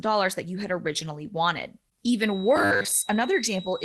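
Speech carried over a WebRTC call, band-limited at about 12 kHz by the codec, turns to robotic sound from repeated short buffers between 2.56 and 2.91 s. The audio becomes a rigid metallic buzz at 100 Hz, likely from the playout side running short of data and looping roughly 10 ms segments while most of the real signal in that span is skipped.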